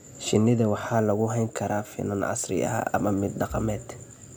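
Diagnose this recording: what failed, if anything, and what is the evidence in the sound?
A crude rate conversion failed at the sample-format conversion stage. From 0.94 s to the end, the speech carries a gritty, inharmonic fizz that tracks loud and bright sounds. It sits roughly 25 dB below the speech. Samples were repeated without filtering, which fits a 32 kHz to 48 kHz step.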